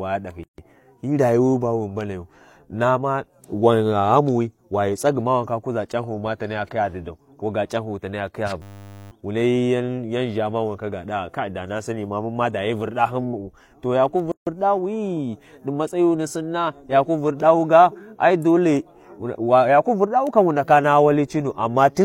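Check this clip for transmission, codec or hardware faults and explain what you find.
Three faults are audible in the speech, of two kinds.

Gap at a join of encoded pieces, at 0.43 to 0.58 s and again at 14.32 to 14.47 s. The speech drops into a gap of about 148 ms and then about 152 ms. The edges are smeared by the codec, and the speech resumes exactly where it stopped. The cause is separately encoded segments joined without trimming. Each encoder pass leaves its start-up delay and last-frame padding in place, and those silent stretches sit between the pieces.

System hang loop, from 8.62 to 9.11 s. The speech is replaced by a steady buzz at 100 Hz. A single 10 ms slice of audio repeats 49 times, and roughly half a second of speech is lost. The computer or driver froze while the audio hardware kept replaying the same ring buffer. The 10 ms loop length points to a short buffer, which is why the result is a buzz rather than a stutter.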